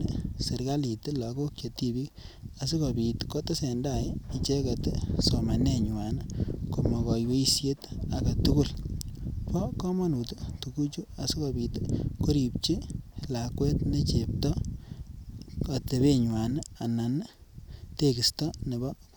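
Listening to the speech recording, nothing stood out as a technical problem at any point.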